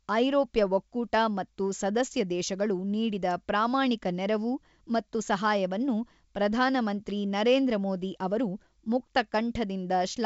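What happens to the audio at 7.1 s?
An electrical switching spike lands at 7.10 s, between "ನೆರವು ಮತ್ತು ಸಹಾಯವನ್ನು ಪ್ರಧಾನ" and "ನರೇಂದ್ರ ಮೋದಿ ಅವರು". It is a sharp snap on top of the speech, likely from a nearby switch arcing into the line.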